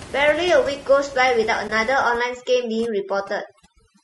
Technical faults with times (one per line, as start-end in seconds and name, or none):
0.00-4.04 low-delay AAC compression
1.67-1.70 AAC frame loss with muting
1.93-4.04 overdone noise removal